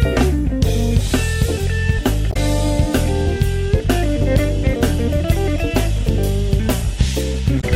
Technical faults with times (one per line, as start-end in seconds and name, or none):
2.29-2.37 damaged data in a compressed stream
7.57-7.64 damaged data in a compressed stream